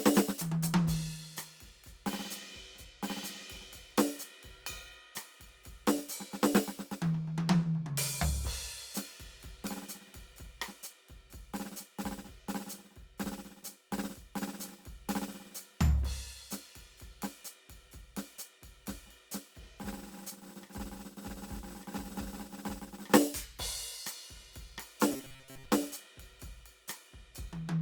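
From 25.12 to 25.65 s, new audio is likely arriving too seldom, so playback keeps looping a short fragment of what it already has while fresh material is skipped. This robotic sound from repeated short buffers covers most of that half-second. The loops impose a fixed buzz at about 133 Hz, which fits a repeated slice of roughly 7.5 ms, and the music collapses into a rigid, metallic drone that only loosely tracks its original movement.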